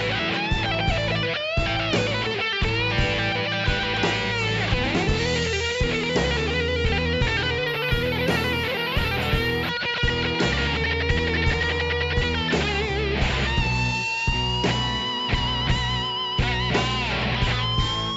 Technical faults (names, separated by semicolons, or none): imaging from linear upsampling